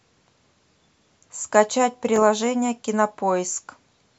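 A Bluetooth stutter interrupts this speech recording: around 2.16 s to 2.19 s, a packet failed to arrive in time, so the receiver filled the gap by replaying its most recent buffer. The result is a brief repeated slice. Roughly 14 ms of audio is missing, which points to a single lost frame, and the speech resumes afterwards as though it had kept playing.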